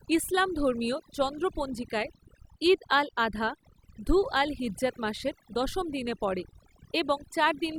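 From start to finish the speech carries overdone noise removal. A noise reduction stage was pushed too hard, so any frequency band close to its noise estimate is pulled far down or cut. The pauses fall to near silence dotted with twinkling specks, and the quieter parts of the voice vanish along with the noise. A noise gate would instead mute the whole signal between phrases without the scattered specks.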